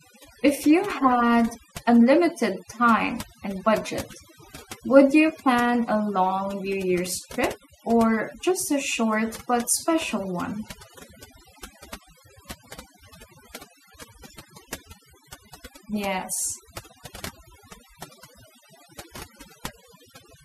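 Overdone noise removal runs throughout: an over-strong denoiser zeroes bands near its noise estimate, leaving twinkling near-silence between phrases.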